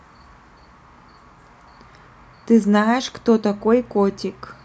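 Nothing in this recording stands out as a technical fault; the speech carries along without any glitches or interruptions that an ear would catch.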